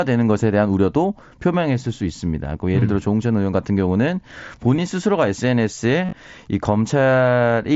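At 2.8 s and again at 4.77 s there are brief concealed Bluetooth headset packet loss events, each about 15 ms of missing audio, which fits two dropped headset frames. The receiver filled each gap by repeating the closest-matching recent stretch of waveform, so both are nearly inaudible. From 6.05 to 6.13 s, 60 ms is lost across 75 ms, longest run 37.5 ms, producing a short buzzy, tonal hold and a slight warble as real audio resumes, heard over the mSBC wideband link's light graininess.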